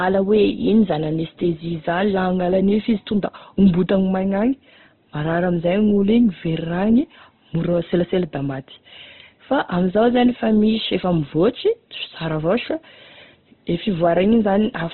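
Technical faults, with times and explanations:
Throughout, Opus compression. The speech has nothing above 4.2 kHz, so it sounds narrowband and dull. The damage is heavy. Tones come out rough, grainy and noisy rather than swirly. The sound has few clear holes, but fine detail is smeared into grit. This is likely Opus in its music (CELT) mode, short of bits. It keeps each band's energy but fills missing detail with noise or copies of lower bands. The grain and narrow band fit a rate near 12 kbps.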